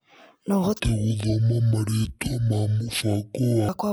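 From 0.8 s to 3.69 s a section at the wrong speed runs at about 0.55 times normal, so the speech turns deep and drawn out, close to ten semitones lower. The likely cause is a player or editor applying the wrong clock to that stretch. On a spectrogram the harmonics and formants drop abruptly at 0.8 s and stretch sideways. In the waveform, syllables and gaps look markedly elongated until the jump back at 3.69 s.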